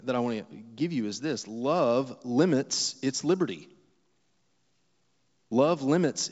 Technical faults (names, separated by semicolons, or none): none